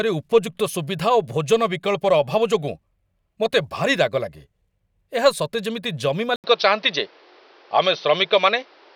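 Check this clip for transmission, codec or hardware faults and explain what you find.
One fault is present. At 6.36 s, after "ସତେ ଯେମିତି ଜମି", the input likely switched to a poorer device: an 80 ms gap, then duller sound to the end. The spectrogram shows nothing above 6.1 kHz, with a new noise floor roughly 35 dB below the speech. The waveform shows a modest level step.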